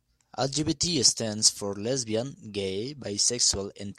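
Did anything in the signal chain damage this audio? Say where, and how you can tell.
Yes. A bit error spike at 0.88 s points to a fault in the digital path, either in storage or on a digital link. A single flipped bit throws one sample off by a power of two before the next sample returns to normal. The result is one isolated tick, reaching about -22 dBFS, that has nothing to do with the speech around it. On the waveform it appears as a lone one-sample needle. On a spectrogram it shows as a thin vertical line spanning every frequency.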